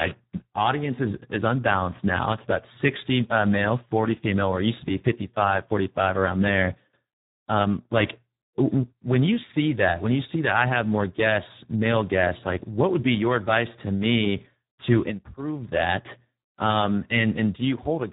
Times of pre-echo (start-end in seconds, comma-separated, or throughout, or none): none